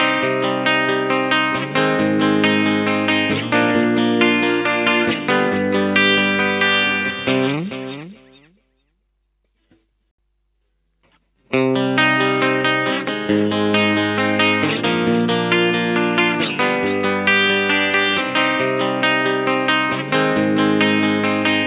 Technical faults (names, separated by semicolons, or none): none